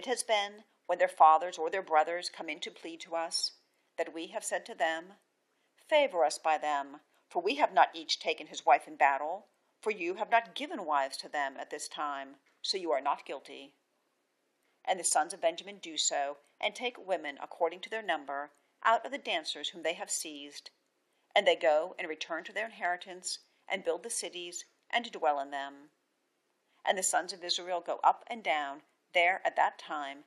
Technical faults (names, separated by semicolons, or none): repeated frames